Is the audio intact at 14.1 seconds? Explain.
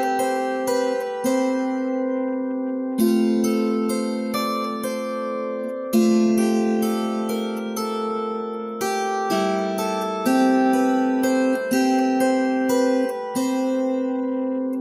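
Yes, at 14.1 seconds the audio is intact, with no dropout, click, distortion or other fault audible at that moment.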